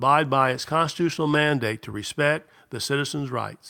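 Call bitrate drop from 0.4 to 1.59 s in this speech clip: coarser coding turns the sound rough, watery or muffled, consistent with a fall from 64 to 17 kbps, then it clears.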